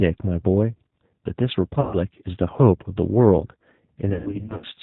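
Throughout, the speech carries plainly audible G.729 codec damage: a rough, synthetic texture consistent with an 8 kbit/s stream. A spectrogram shows a hard ceiling at 4 kHz. From 1.81 to 1.97 s, VoIP packet loss concealed by the speech codec stretches the last sound into a fading buzzy tone or coloured noise. From 4.10 to 4.67 s, about 350 ms of losses scattered in runs of up to 100 ms leave smeared, flat-lined harmonics on the spectrogram and a shrinking waveform envelope.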